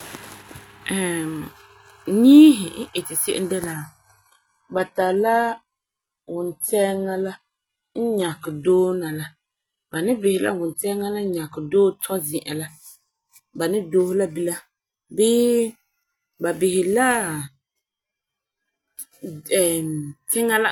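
A speech clip in which an adaptive stream drops to a lower bitrate from 3.73 to 11.73 s, between "iti se'em de" and "dɔɔ tɔ zi'an la". The treble drops, with nothing above 11.8 kHz, which points to a switch from 96 kbit/s AAC to 16 kbit/s HE-AAC. Unlike a dropout, the change is abrupt but gapless in both directions.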